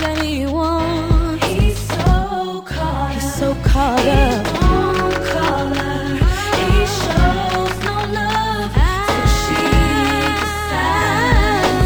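Imaging from linear upsampling runs throughout, fitting a 22 kHz to 44.1 kHz conversion. Weak interpolation leaves mirrored images from 11.03 to 22.05 kHz, about 30 dB down, adding faint metallic shimmer.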